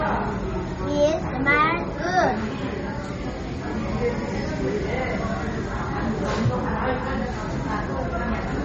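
Everyday sounds run watery and swirly for the whole clip, with plainly audible smearing on attacks and nothing above 8.1 kHz. This is likely MP3 compression at a starved bitrate, one that fits roughly 32 kbps, cutting treble and dropping weak frequency detail.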